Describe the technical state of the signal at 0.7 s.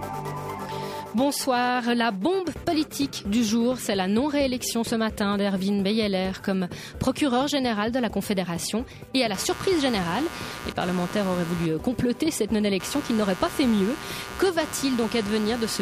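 The signal is intact at 0.7 s, with no fault audible at that moment.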